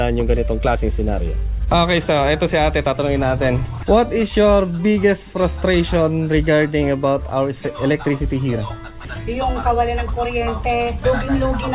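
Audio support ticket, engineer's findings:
No fault found; call path behaving as expected, with band-limiting at 4 kHz and coding noise that fit a G.711 mu-law link at 64 kbps.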